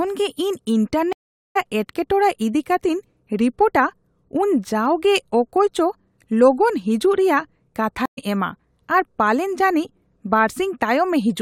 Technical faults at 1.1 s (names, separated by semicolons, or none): stream reconnect